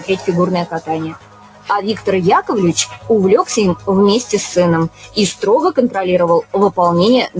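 A noise suppressor applied to music or sounds is active across the whole clip. A suppressor built for speech treats steady, sustained material as noise, so its gain keeps shifting with a level swing of around 15 dB. That leaves the sound pumping, fluttering or thinning out rather than holding a constant level. Sound cut by the noise suppressor is heard in four places: 0.0 to 0.28 s (drop of about 10 dB), 0.65 to 1.7 s (about 17 dB, the deepest and longest at roughly one second), 2.85 to 3.1 s (about 14 dB) and 4.89 to 5.17 s (about 15 dB). In these stretches the suppressor judged the held or fading content to be noise and pulled it down, so sustains sink and decays end early while sudden onsets largely survive. The audio also passed through a call path whose band stops at 8 kHz, which fits G.722 at 64 kbps, carrying that codec's coding noise.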